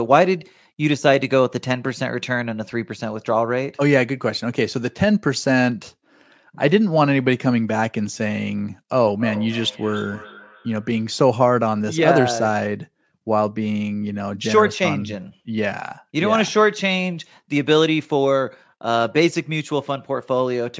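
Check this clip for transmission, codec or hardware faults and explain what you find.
One fault: a feedback echo between two devices, 9.19 to 11.13 s. Another device's playback fed this microphone, beyond its echo canceller, so speech returns roughly every 300 ms, peaking about 16 dB below.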